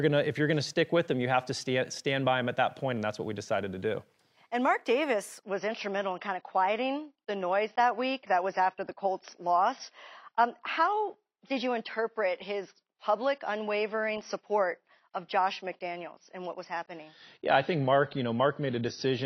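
At 5.43 s the speech abruptly loses its treble, with no gap. This is an adaptive stream at a lower bitrate. Nothing remains above 6 kHz, and codec artefacts rise. That fits a drop from about 96 kbit/s to 24 kbit/s AAC. It lasts to the end.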